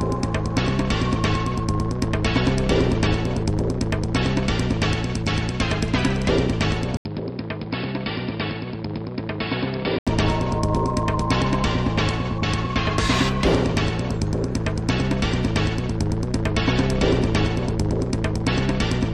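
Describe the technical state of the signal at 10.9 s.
At 10.9 s the signal is intact, with no audible technical fault at that point.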